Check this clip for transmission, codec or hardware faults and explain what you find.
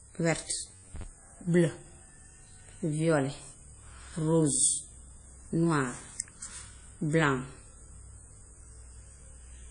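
Two faults are audible in this speech clip: codec damage throughout and a short robotic stretch near the start.

Throughout the clip the sound is ringing and washy, with hiss that swells and fades with the speech, and nothing is present above 10.1 kHz. This is likely WMA compression at a low bitrate, around 32 kbps. The transform codec spreads quantisation noise across long blocks, and the bitrate limit zeroes weak spectral lines and removes the top band entirely.

From 0.63 to 1.03 s, the speech turns into a rigid metallic buzz at 93.8 Hz that only loosely follows the speech. This is robotic sound from repeated short buffers, likely caused by audio arriving too seldom. The player fills each gap by replaying the last segment, and a 93.8 Hz buzz fits a repeat length of about 10.7 ms. Roughly half of this stretch is repeated material, so the real audio in those gaps is lost.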